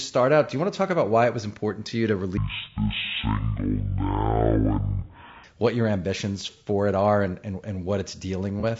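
Speech, coloured throughout by plainly audible low-delay AAC compression, likely AAC-ELD at a rate near 32 kbps: grainy, rough tone, with noise filling the gaps between harmonic stripes on a spectrogram. From 2.37 to 5.44 s a section plays at the wrong speed, about 0.51 times normal, dropping pitch roughly ten semitones, likely from a clock mismatch. Harmonics sit visibly lower and are stretched in time. At 8.60 to 8.65 s one AAC frame, about 30 ms, is lost and concealed, leaving a brief smeared, noisy patch that shows as a blurred spectral slice.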